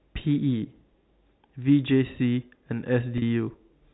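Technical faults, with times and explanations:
3.18 to 3.22 s, packet loss with pitch repetition: About 40 ms of audio drops out, which fits two lost 20 ms packets. The receiver repeats the last pitch period to fill the gap. This gives a brief held, buzzy tone inside the telephone-band G.711 sound.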